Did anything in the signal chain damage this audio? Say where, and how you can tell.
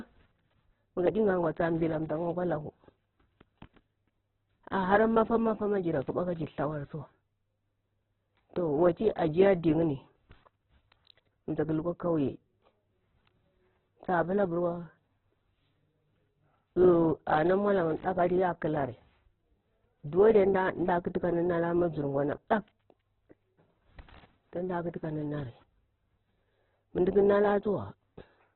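Yes, at the codec stage: the speech was likely starved by Opus compression at a rate that fits about 8 kbps. Throughout, nothing survives above 4.2 kHz, and each band keeps its energy but gets folded or noise-filled detail, so the speech sounds rough and grainy.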